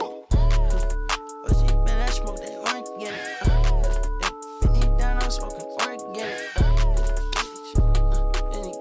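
Nothing in the audio stood out as a technical problem on listening.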